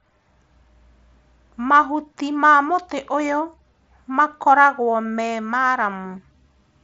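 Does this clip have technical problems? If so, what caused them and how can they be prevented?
No, there's nothing here to fix or prevent; it's just speech coming over a Bluetooth mSBC headset link, which carries it up to about 7.7 kHz the way that kind of connection normally does.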